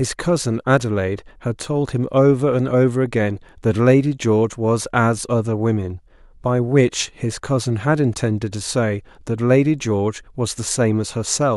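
From 0.36 s to 11.32 s the speech carries clock slip clicks: faint, regular ticks roughly every third of a second, around forty in all. Each is likely a single sample dropped or repeated as two unsynchronised clocks drift apart by roughly 70 ppm.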